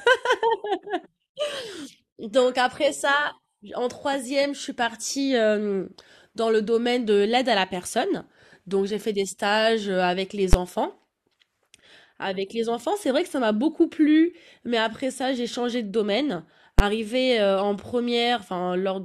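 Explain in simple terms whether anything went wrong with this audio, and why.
Two sharp bangs interrupt the speech, at 10.53 s and 16.79 s. Both are invalid numbers at full scale: a calculation in the processing produced infinite or invalid values, which were forced to the loudest possible level. Each lasted about 12 ms, which fits a 512-sample processing block. At that length the loud start and end of the block merge into a single bang instead of two separate pops.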